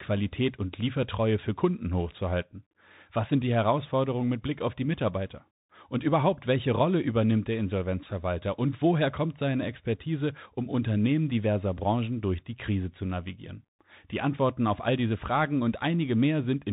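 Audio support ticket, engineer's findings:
Muffled, scratchy sibilants, granular hiss under speech, throughout. Bluetooth CVSD headset codec: one-bit delta steps lag loud highs; nothing above 3.8 kHz, consistent with a 64 kbps headset link.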